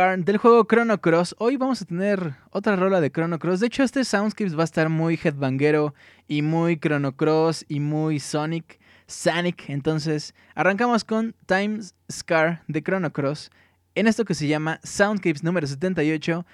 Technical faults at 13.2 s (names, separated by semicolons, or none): none